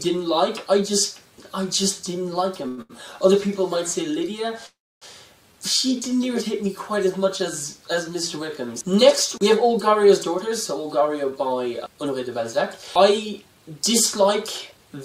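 Right around 2.68 s you get a short stall from a late packet, and a second one follows almost immediately at 2.82 s. A packet showed up after its slot, the jitter buffer ran dry, and the receiver just stretched the last bit of sound to cover the wait: roughly 95 ms the first time, 79 ms the second. Nothing actually gets lost, but that moment sounds held and a little buzzy, twice in quick succession.

At 4.66 s there's a longer hiccup, lasting to about 5.05 s, that comes across as a call audio freeze. The sound hangs and then dies away, and about 280 ms of that stretch is plain silence before things pick up exactly where they left off, adding roughly 351 ms of delay in all. The likely cause is packets getting held up in transit long enough to empty the buffer completely.

Later the receiver claws that delay back with a jitter buffer speed-up, first from 10.48 to 12.28 s at about 107% speed, trimming something like a seventh of a second, then again from 12.99 to 14.78 s at about 106%, trimming around a tenth. 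It does this by snipping out tiny pitch-period-sized slices over and over, so the pitch stays put but those passages feel noticeably rushed.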